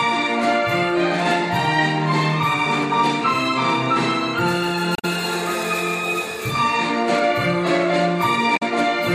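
At 4.95 to 5.05 s, and again at 8.56 to 8.62 s, there is damaged data in a compressed stream. In each spot a short run of the encoded data is corrupt, so the decoder misreads or discards the affected frames and has to hunt for the next valid frame header before it can lock back on. Each event is heard as a brief chirp or blip cutting across the sound, about 0.1 s long the first time and about 0.07 s the second.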